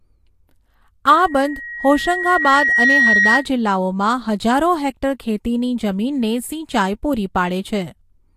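From 1.09 s to 3.49 s the speech is overtaken by loudspeaker feedback squeal: the microphone is picking up the loudspeaker it drives, and at 1.9 kHz the loop gain tops unity, so that tone feeds on itself. Unlike a steady interference whistle, it is not there from the start. It swells over about two seconds into a piercing squeal that ends up roughly 5 dB louder than the speech before it stops.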